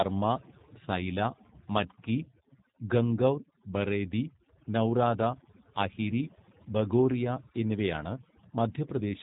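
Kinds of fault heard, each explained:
Overdone noise removal: noise reduction pushed too hard switches off frequency bands near its noise estimate, leaving near-silent gaps with twinkling specks.
G.729 codec: a low-rate VoIP codec rebuilds the speech from a vocal tract filter and pitch predictor, sounding plainly rough and synthetic, with nothing above about 3.8 kHz.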